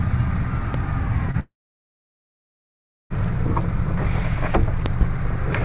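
At 0.74 s a loud pop cuts in, roughly 10 dB above the sound. It is a single sharp click, likely from a brief voltage pulse.

From 1.31 to 1.37 s comes short concealed packet loss. About 30 ms never arrived. The gap was patched by extending the last sound, leaving a quick smear.

A long network dropout runs from 1.40 to 3.13 s. Over 1.7 s of audio was lost, likely in transit. A fading buzz gives way to about 1.6 s of silence, and the sound resumes past the gap.

Between 4.86 and 5.05 s, another loud pop arrives as two thumps in quick succession, up to roughly 15 dB above the sound. Both sit over the narrow, telephone-like band that stops at 4 kHz.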